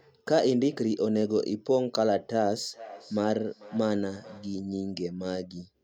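From 2.69 to 4.61 s the speech picks up a feedback echo between two devices. A second device in the room plays this call aloud, the first microphone captures that playback, and the local echo canceller ignores it because it only removes its own device's output. Copies return at about 0.4 s intervals, peaking about 18 dB below the speech, each thinner and more ringing. Unlike room reverberation, these are distinct, evenly spaced repeats rather than a smooth decaying tail.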